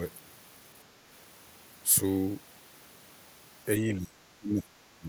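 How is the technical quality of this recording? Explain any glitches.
The recording has a clear glitch near the end: speech suppressed in double talk. The speech drops sharply three times, from 3.78 to 4.19 s, from 4.37 to 4.70 s, and from 4.97 s to the end. Each dip cuts the level by around 20 dB, so the speech sounds pushed away or briefly gone. The likely cause is an echo canceller facing both sides talking at once. It could not tell this talker from the returning loudspeaker echo, so it turned everything down.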